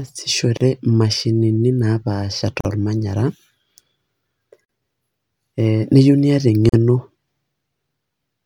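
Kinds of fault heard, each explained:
Gap at a join of encoded pieces: the speech drops into brief silence at 0.57, 2.61, 4.65 and 6.69 s, every 2.0 s, lasting 33 ms then 43 ms, where separately encoded pieces meet untrimmed; leftover encoder delay and end padding form the hole, with smeared edges.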